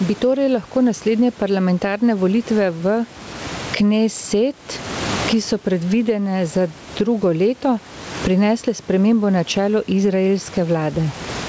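From start to end the speech shows gain pumping, with the level moving by something like 25 dB. This is likely a microphone gain set far too high with a fast limiter or compressor clamping down on every peak. The dynamics come out flattened and squashed. The room noise sits about 30 dB under the speech. The top end stops at 8 kHz, which fits a wideband call codec.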